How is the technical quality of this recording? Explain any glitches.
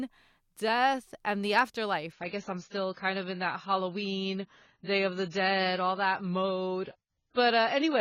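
The quality drops sharply partway through. From 2.12 s, right after "death and the", to the end, the adaptive stream falls to a lower bitrate, consistent with AAC dropping from about 96 to about 16 kbit/s. Nothing remains above 7 kHz, so the speech turns dull with more codec artefacts. The switch is abrupt, with no gap.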